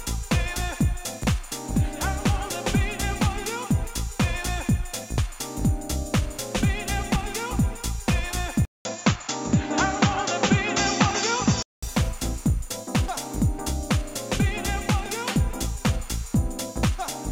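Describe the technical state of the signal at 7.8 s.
At 7.8 s the signal is intact, with no fault present at that moment.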